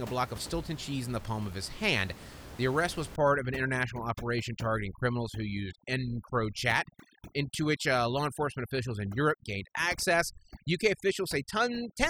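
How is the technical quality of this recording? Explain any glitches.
The recording is marred by heavy-handed noise reduction over most of its length. Overdone noise removal, from 3.16 s (just after "arrest was") to the end: the suppressor treats the room noise, sitting about 16 dB below the speech, as its noise estimate and cuts nearby frequency bands hard, taking quiet speech detail with them. The background drops and breaks up into twinkling specks.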